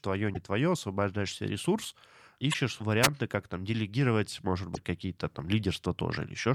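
A speech clip with damaged data in a compressed stream at three points: 0.30–0.37 s, 2.50–2.55 s and 4.72–4.77 s. Each is a short chirp or blip. Bad bytes garbled the frames there. The decoder lost sync and skipped ahead to the next valid frame. At 3.02–3.08 s there is a wireless microphone squelch dropout. Hiss rises briefly as the FM radio signal fades. The receiver's squelch then mutes the output for about 5 ms before the sound returns.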